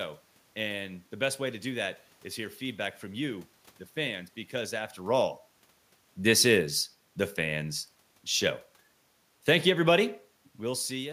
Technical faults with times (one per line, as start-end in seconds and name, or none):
9.34-9.85 automatic gain falling